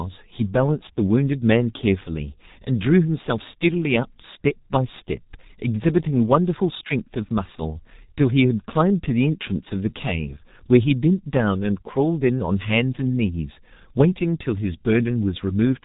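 From start to finish the speech sounds muffled and hoarse, with consonants smeared together. Nothing comes through above about 4 kHz. This is heavy G.723.1 codec damage. The signal was squeezed through a low-rate telephony coder at a rate that fits roughly 6 kbit/s. It models the voice in 30 ms frames and updates that model too slowly to follow quick articulation.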